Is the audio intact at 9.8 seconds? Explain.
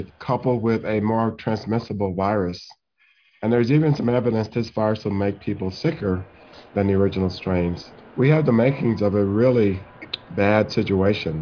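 Yes, the audio is intact at 9.8 seconds, with nothing at that moment that breaks or distorts the sound.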